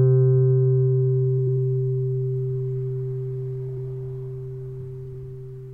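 Frames out of order at 1.38–1.57 s, 3.69–3.87 s and 5.05–5.24 s: two adjacent blocks of about 93 ms each play swapped, giving a garbled flutter and no lost time.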